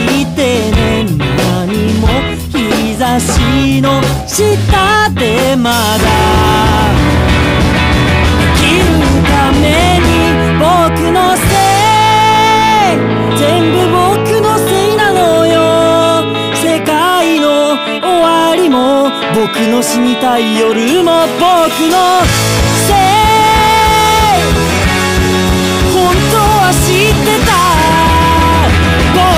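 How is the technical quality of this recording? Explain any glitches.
The technical quality holds up, with no glitches to explain.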